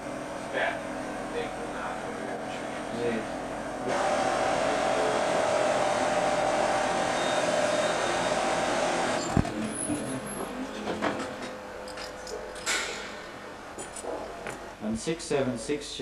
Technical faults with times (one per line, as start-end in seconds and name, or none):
0.00-16.01 channel delay (comb filtering)